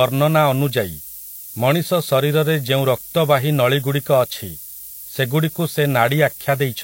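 From start to finish the speech carries low bit depth with noise shaping. The samples are rounded to only 6 bits, and the rounding error is fed back so that most of it is pushed up toward the top of the band. It sounds like a thin, steady hiss roughly 10 dB below the speech that grows brighter with frequency. On a spectrogram it shows as a constant noise floor sloping upward into the highest band, present even in pauses.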